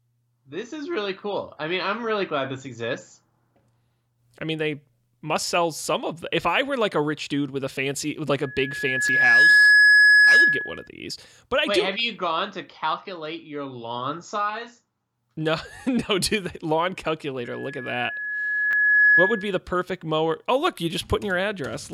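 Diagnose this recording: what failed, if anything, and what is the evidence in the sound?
Loudspeaker feedback squeal, 8.43 to 10.88 s and 17.44 to 19.60 s, in the acoustic path between loudspeaker and microphone. After "a fancy with like", a steady 1.7 kHz tone swells over roughly a second to about 15 dB above the speech. After "no do the lawn", the same tone builds over about one and a half seconds to about 10 dB and clears before "perfect mower". The microphone is re-amplifying its own loudspeaker, and at 1.7 kHz the loop gain exceeds one.

Repeated buffer at 9.08 s and at 18.71 to 18.73 s, at the driver or buffer stage. These are brief clicks with a hint of buzz, the first from a single hard-joined repeat and the second from a double repeat. Each repeated segment is about 10 ms long, which fits a 10 ms buffer. Fresh audio was late reaching the device, so it replayed the previous buffer. 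That replaced roughly 10 ms and 20 ms of audio, both falling inside the squeals.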